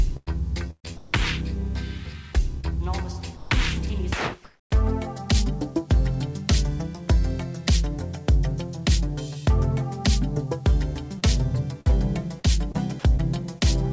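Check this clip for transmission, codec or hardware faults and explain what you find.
The clip has two bursts of packet loss, one short concealed loss, three stretches that sound like comfort noise, and a run of scattered short gaps. Nothing reaches above 8 kHz, which fits a G.722 call path at 64 kbps.

Burst of packet loss: at 0.17 to 0.29 s about 100 ms is missing, and at 0.71 to 0.86 s about 140 ms is missing. The receiver extends the last sound and fades it, and the second burst ends in roughly 90 ms of silence before the audio resumes further on. The single long hole, held and then dying away, is what separates this from scattered gaps.

Short concealed packet loss: at 2.61 to 2.65 s about 20 ms never arrived in time. The receiver carries the previous sound across the hole and blends it back into the real audio, leaving a brief smear or wobble. It is far shorter than a burst and leaves no audible fade.

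Comfort noise in place of the background: at 0.71 to 1.13 s, 3.37 to 3.51 s and 4.45 to 4.71 s the real background gives way to steady, featureless noise. This is likely discontinuous transmission, with the receiver generating shaped noise during pauses. The substitute is about 2 dB quieter in the second stretch and about 4 dB louder in the third. It is a change in texture rather than lost sound.

Scattered short gaps: between 11.19 and 13.63 s there are about seven separate holes, none longer than about 50 ms, with roughly 7% of that span patched. Each hole is filled by continuing the last sound, giving isolated hiccups spread over a stretch instead of one long dropout.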